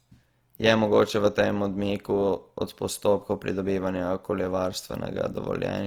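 A short speech recording carries plainly audible Opus compression damage from start to finish. The voice has a grainy, rough texture, with harmonic detail smeared into noise-like fill rather than the swirling, hollow artefacts of MP3. Bandwidth stays full, with content reaching about 20.2 kHz, which points to the music-oriented CELT mode rather than the muffled speech mode. The likely cause is encoding at a low rate, which fits roughly 24 kbps.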